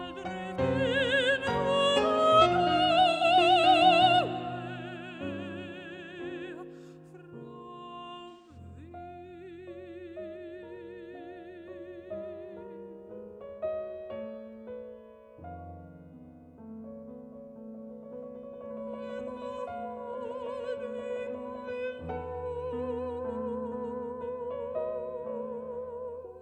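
At 3.12 to 3.23 s and again at 8.29 to 8.57 s there is AAC frame loss with concealment. The decoder patched each gap from the last good spectrum, which fits roughly two and four missing frames. The first gap is a brief smeared, noisy patch. The longer second one turns phasey. On a spectrogram both look like blurred, flattened bands.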